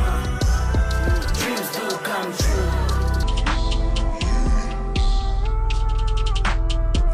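At 3.23 s the audio drops into a section at the wrong speed that runs to the end: playback slows to about 0.665 times the original rate, pulling pitch down by roughly seven semitones, so everything turns deep and sluggish, likely from resampling against a mismatched clock.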